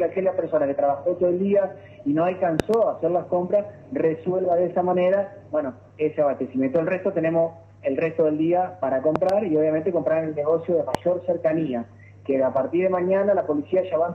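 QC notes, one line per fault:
0.0–2.0 s, adaptive stream starting at a low bitrate: the top end is missing or sounds synthetic and smeared, as in a very lean HE-AAC stream near 16 kbit/s. At 2.0 s it jumps to AAC near 96 kbit/s with no gap or level dip, unlike a dropout or filter.
2.60–2.76 s, 9.16–9.32 s and 10.95–10.97 s, loud pop: sharp transients about 20 dB above the sound, a double pop at each of the first two times and a single one about 15 dB up at the third. The sound continues beneath them, with no gap or repeat as a buffer glitch would leave. The likely cause is an electrical step from a plug, switch or static discharge.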